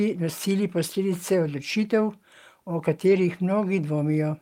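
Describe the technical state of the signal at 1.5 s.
Right after "nosili posledice", from 1.45 to 1.51 s, the speech turns briefly rougher and noisier but never drops out. This is a lost packet rebuilt from error correction. The sound points to two missing packets, with about 40 ms replaced by the lower-bitrate copy carried in the following packet.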